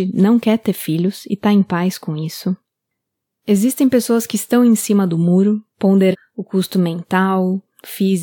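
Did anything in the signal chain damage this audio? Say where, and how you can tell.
Yes. Compressed frames were skipped at the codec or storage stage: at 6.11 s around ten frames never decoded, so the speech jumps ahead about half a second.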